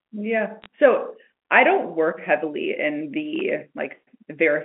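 A telephone-band speech recording, narrowed to roughly 200 Hz to 3.4 kHz by G.711 mu-law coding, carries two kinds of damage. From 0.62 to 0.66 s there is a short spray of sharp ticks from bit errors on a digital phone line. Each flipped bit corrupts a single logarithmic sample, and a rate of roughly a few errors per thousand bits is enough to make hits on sign or high-order bits stand out. The speech underneath keeps flowing unbroken, and that continuity is what separates this from a contact fault. From 3.36 to 3.50 s comes loose connector crackle, an irregular scratchy burst lasting about 0.14 s. Here a worn or dirty contact makes and breaks repeatedly, so the signal itself is chopped in and out. This sounds ragged and interrupted rather than like isolated clean clicks laid over intact audio.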